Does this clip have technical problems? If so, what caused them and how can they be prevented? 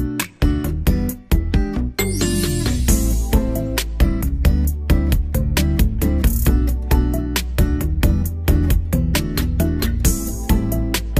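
No, there are no technical problems to address here.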